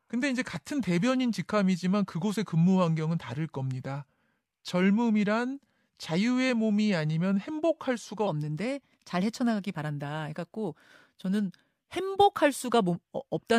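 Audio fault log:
0.0–8.27 s, section at the wrong speed: the speech runs at 0.856 times its recorded rate, so it drags and sits about three semitones low, with pitch and tempo dropping together until 8.27 s, likely from playback against a mismatched clock.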